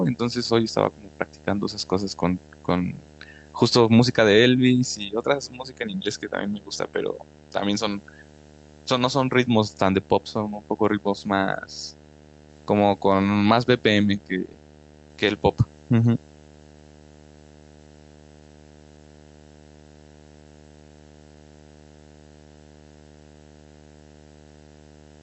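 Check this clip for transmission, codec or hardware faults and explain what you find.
Three faults are present in this speech clip, which came through a call codec band-limited to 8 kHz.

Video or display buzz runs throughout: a 75 Hz field-rate buzz with hash above it, about 25 dB below the speech. Unlike mains hum, 75 Hz is no 50 or 60 Hz harmonic.

Clock drift between sender and receiver persists all through, the sender running about 4 percent fast. The jitter buffer overfills, forcing cuts, which separates it from packet loss, where gaps appear instead.

Repeated timing corrections occur from 0.19 to 25.03 s, all trimming audio to hold 104 percent speed. They sound like faint hiccups and a slightly rushed, uneven tempo, never like silent dropouts.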